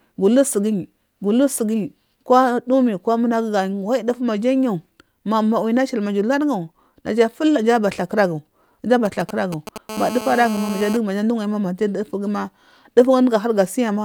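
A 2G phone close to the recording chain began exchanging signalling with its network from 9.05 to 9.78 s, transmitting in short groups of radio bursts that the audio circuitry rectified into the signal. These GSM signalling bursts sound like a galloping dit-dit-dit of brief 217 Hz buzzes sitting over the speech, roughly 10 dB below it and unrelated to anything in the audio.

From 9.89 to 10.97 s the same phone moved into a call and transmitted continuously at its frame rate of 217 bursts per second. Each radio pulse was again rectified by the audio electronics, producing a GSM phone buzz: a hard, raspy 217 Hz tone rich in harmonics. It is nearly steady during the call, at about 11 dB below the speech level.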